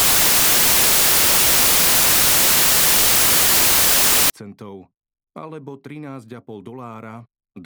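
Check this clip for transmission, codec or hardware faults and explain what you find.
One fault here, and it's a loud one: from 0.0 to 4.3 s the clip suffers samples built from the wrong bytes. Whatever reads the stream is pairing bytes incorrectly, off by one, swapped, or misaligned, so the jittery low-order bits land in the high-order position of every sample. What you hear is a blast of loud, harsh broadband noise across those first 4.3 seconds.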